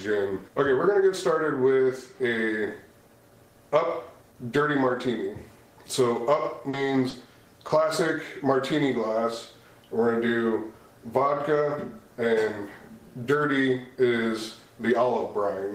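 Three brief dropouts of short concealed packet loss fall at 6.69–6.75 s, 7.09–7.15 s and 7.67–7.71 s, each replaced by about 40, 40 and 20 ms of synthesized fill. The decoder extends the preceding sound and then blends back in, so each gap is heard as a tiny smear or wobble. On a spectrogram, the preceding pattern stretches flatly with no new onsets.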